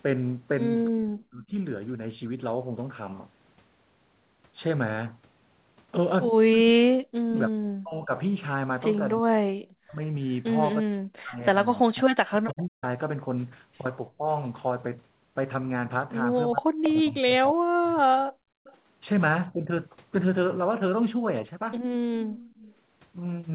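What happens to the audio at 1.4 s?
At 1.4 s the speech is inside a suppressed stretch from 0.9 to 1.54 s, where its level drops sharply, by up to about 40 dB. The likely cause is speech suppressed in double talk: an echo canceller mistook overlapping talk for loudspeaker echo and attenuated it.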